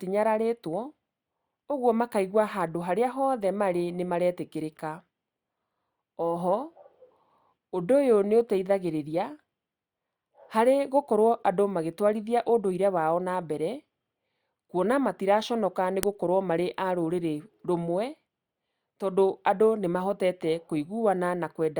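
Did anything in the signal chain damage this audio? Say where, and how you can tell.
Yes. At 16.03 s there is a single sharp, loud snap, the signature of a file header played as audio. The damage happened at the storage or file-joining stage. Two WAV pieces were concatenated, or streamed back to back, with the second piece's header left in, so its few dozen bytes of metadata were decoded as a burst of sample values. Unlike a buffer underrun click, it occurs once, exactly at a join, with no periodic repetition and no missing stretch of speech around it.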